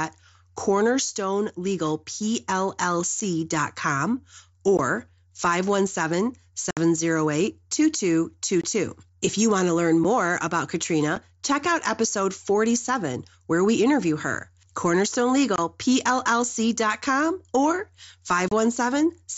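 Speech carried over a wideband mSBC headset link, which limits it to about 8 kHz with a light grain, has eight holes from unconcealed Bluetooth headset packet loss: 3.20 s, 4.77 s, 6.71–6.77 s, 8.61–8.64 s, 10.04 s just after "you want to learn", 11.16 s just before "check out episode", 15.56–15.58 s and 18.48–18.52 s. Each gap is filled with silence or an idle pattern and has hard edges rather than being smoothed or filled with repeated sound, as concealment would do. The gaps last 7.5 to 60 ms, always whole multiples of 7.5 ms, which points to lost headset frames.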